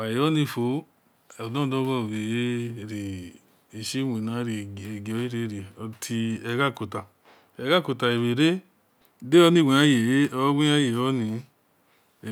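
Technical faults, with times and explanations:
Nothing in this speech recording stood out as a technical problem on listening.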